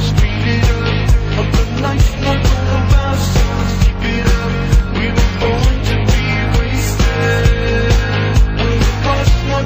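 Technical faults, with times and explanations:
No technical faults can be heard anywhere in the signal, so there is nothing to list with a time or an explanation.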